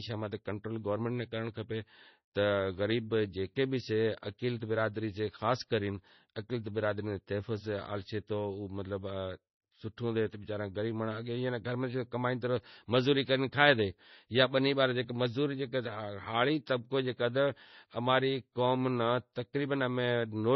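Speech throughout the clip has likely gone through heavy MP3 compression at a bitrate low enough to suggest roughly 24 kbps. Nothing remains above 5.9 kHz, and the sound is dull and watery.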